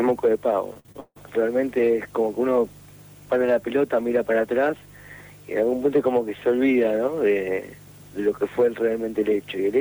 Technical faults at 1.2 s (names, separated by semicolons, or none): repeated packet loss (robotic sound)